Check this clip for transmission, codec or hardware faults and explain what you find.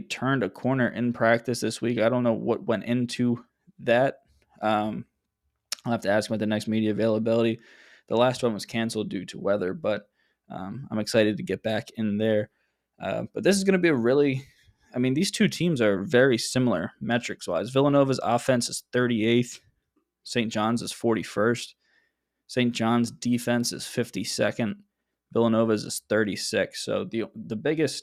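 No transmission, codec or hardware fault is audible anywhere in the speech.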